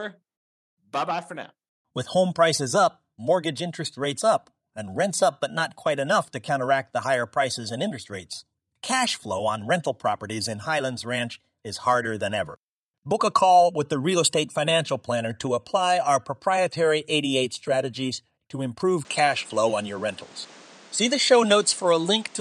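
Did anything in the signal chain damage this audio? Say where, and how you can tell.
Yes. From 19.05 s, just after "strategies to", to 22.41 s, everything above 9.8 kHz is gone and fresh noise sits roughly 30 dB below the signal, without a gap or level jump. This points to the input switched to a poorer device, likely a narrower-band microphone.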